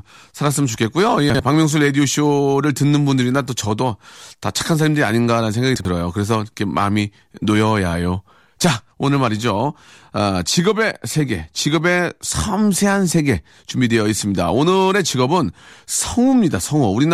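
At 1.3 s the speech jumbles briefly, and it happens again at 5.76 s. Both are chunks out of order. Each spans about 93 ms, two chunks of roughly 46 ms, where the earlier chunk shows up one place late and plays after the one that should follow it. Nothing goes missing, but you hear a quick scrambled blip. A 46 ms chunk fits a 2048-sample block at 44.1 kHz.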